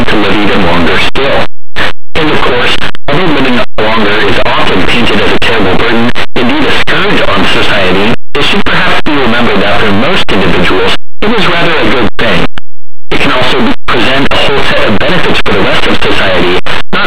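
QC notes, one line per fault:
Throughout: linear audio read as companded. Linear 8-bit samples decoded as mu-law turn small values just one side of zero into the largest outputs, causing harsh distortion.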